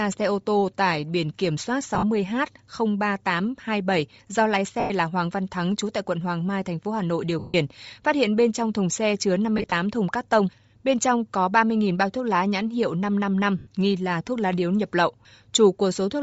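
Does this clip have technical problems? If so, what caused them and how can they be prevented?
Yes. Throughout the speech there is Bluetooth LC3 compression damage, most likely from a low-rate LE Audio link: the upper spectrum is thinned out and replaced with a breathy, grainy hiss that sits on every syllable, which points to roughly 32 kbps with 10 ms frames. Unlike a plain low-pass band limit, the top end isn't simply dull; it is filled with noise that sounds like texture. Raising the LC3 bitrate or link quality prevents it.

Lost LE Audio frames interrupt the speech five times. At 1.95 to 2.03 s, after "tải biển kiểm soát", 60 ms of audio is lost in scattered gaps over 80 ms, the longest about 50 ms. At 4.80 to 4.91 s, 100 ms is lost. At 7.39 to 7.55 s, 150 ms is lost before "phát hiện bên trong". At 9.58 to 9.72 s, between "trong thùng xe chứa" and "thùng cắt tông", 80 ms is lost in short gaps of about 20 ms spread over 140 ms. 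At 13.58 to 13.67 s, 90 ms is lost. In each gap the decoder repeats the last spectrum with scrambled phase, so the sound becomes a noisy smear, and the longer gaps fade toward silence. Clicks or hard dropouts would break off sharply instead. Keeping the Bluetooth link strong and free of interference prevents these losses.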